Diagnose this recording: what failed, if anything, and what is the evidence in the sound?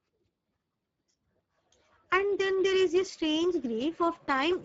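The failure is at the codec stage: the speech went through the Speex codec at a low bit budget, roughly consistent with a rate near 10 kbps, and the damage is plainly audible throughout. Speex, a CELP coder, models the vocal tract and spends its limited bits on the excitation signal, so here the excitation is coarsely coded and the speech takes on a noisy, hoarse texture. The band also stops at about 7.7 kHz, with nothing above it.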